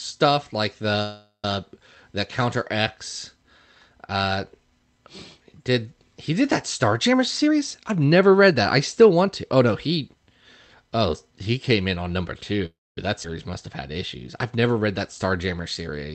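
At 1.02 to 1.45 s the speech stops for a call audio freeze, likely from delayed packets emptying the jitter buffer. The last sound is stretched into a fading buzz ending in about 120 ms of silence. Speech then resumes where it left off, 413 ms late, with nothing missing.

From 7.08 to 10.09 s a jitter buffer speed-up trims pitch periods repeatedly to shed excess delay. Speech runs at about 114% speed, losing roughly 0.4 s, and sounds hurried at unchanged pitch.

At 12.66 to 12.98 s a second call audio freeze, likely from the same cause, inserts a 314 ms gap. A brief fading tail gives way to about 240 ms of silence before the speech continues intact.

At 13.23 to 13.25 s a skip ahead drops about 70 ms of audio. The two sides are butted together almost directly, making an abrupt forward jump.

At 14.56 to 14.80 s a jitter buffer slow-down repeats pitch periods to rebuild its reserve. It adds 44 ms, so the speech drags at about 85% speed with drawn-out sounds at the same pitch.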